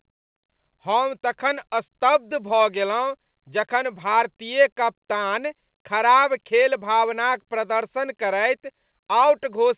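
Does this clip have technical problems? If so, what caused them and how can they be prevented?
No, nothing in this speech recording stood out as a problem on listening, so there is nothing here that needs preventing.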